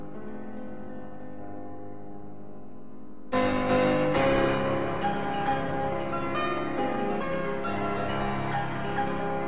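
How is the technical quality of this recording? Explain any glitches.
No glitches can be heard anywhere in this music.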